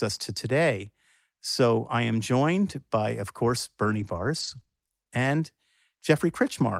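Speech, with repeated packet loss (robotic sound) from 3.83 to 4.91 s. Short holes recur, each at most 20 ms, totalling 160 ms missing. Each is patched by extending the preceding sound, roughly 15% of the stretch. The result is choppy speech with pieces missing.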